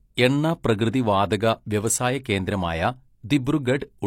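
At 2.24 s a short hiss leads into a sharp attack, softening its onset: pre-echo, where codec block noise spreads about 16 ms ahead of the transient.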